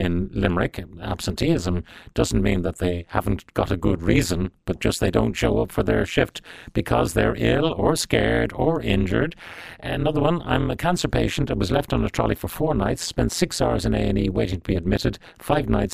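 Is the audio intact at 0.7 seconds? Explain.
No. At 0.7 seconds, as everywhere else in this speech clip, there's overlap-add ripple running the whole way through. The audio was chopped into windowed frames and stitched back with an overlap that doesn't add up to a steady gain, so the level dips and swells once per frame, around 150 times a second. The dips go deep, about 60 dB, so you get a harsh, metallic buzz with extra tones over the speech.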